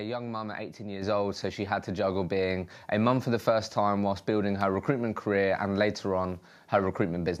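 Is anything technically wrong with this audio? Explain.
Yes, two faults. At 1.02 s, just before "old so she had", the microphone volume steps up by about 6 dB as the call software raises the input gain. Voice and background jump together, a sudden step in waveform height.

From 3.43 to 3.45 s, between "a mum for the" and "time whilst building her", chunks are out of order: an 11.6 ms chunk plays one slot late. This produces a brief jumbled moment, with vertical discontinuity lines on the spectrogram.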